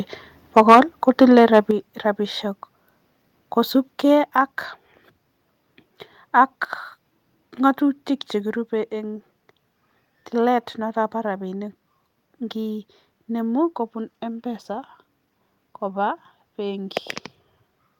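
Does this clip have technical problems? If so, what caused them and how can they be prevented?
Yes. From 0.56 to 0.8 s the loudest peaks are flattened and harsh, driven about 9 dB past full scale, with a sizeable share of samples clipped. From 1.08 to 1.59 s the same crackling edge returns more mildly, about 2 dB over and with only a small fraction of samples clipped. The likely cause is microphone overload: the input volume was set so high that peaks ran into the converter's ceiling and their tops were sheared off. To prevent it, set the microphone input level so that the loudest speech peaks stay well below full scale.

The overall level of the speech and the background drops abruptly three times: by about 2 dB at 0.72 s, by about 6 dB at 1.71 s and by about 3 dB at 4.26 s. The first drop falls inside the first clipped stretch, and the second follows the second one. This pattern likely reflects the microphone volume being stepped down by the call software, which reacted to the clipping by cutting the device's input volume in single jumps. 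To prevent it, start with a lower input level so that the software never needs to make these corrections.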